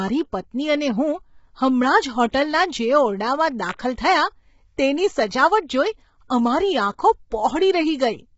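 From the start the speech has a rough, grainy quality, with noise filling the gaps between harmonics and nothing above 7.7 kHz. This is likely low-delay AAC compression of the AAC-ELD kind. Its short frames separate pitch harmonics poorly, and the heavy damage fits a bitrate around 16 kbps. On a spectrogram the harmonic stripes look smeared and hazy, with a hard ceiling at 7.7 kHz.

Pre-echo follows at three attacks. The first comes at 2.30 s, between "હમણાં જ" and "જે ઓરડામાં", and spreads about 35 ms ahead of its onset. The second comes at 3.73 s, after "જે ઓરડામાં" and just before "થયાં તેની", lasting about 59 ms. The third comes at 3.95 s, just before "થયાં તેની", lasting about 27 ms. In each, coding noise meant for the loud attack also fills the quiet moment before it. This is heard as a brief hiss and a softened, smeared onset. The waveform shows low fuzz rising ahead of each transient, and the spectrogram shows a faint broadband smudge leading each attack.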